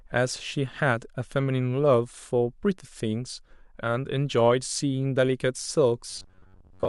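Robotic sound from repeated short buffers runs from 6.10 s to 6.88 s. The likely cause is audio arriving too seldom, so a segment of about 10.7 ms is looped over most of the span, imposing a rigid, metallic 93.8 Hz buzz on the speech.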